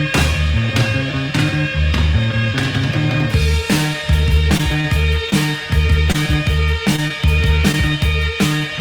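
Between 3.93 and 7.75 s there are scattered short gaps: around seven brief dropouts, each lasting no more than about 30 ms, where audio data arrived late or not at all. The receiver filled each hole by extending the preceding sound, so only a small share of the stretch, about 4 percent, is concealed. The result is mostly clear audio broken by ticks, smears and hiccups, with slight timing shifts where the patching added or removed audio.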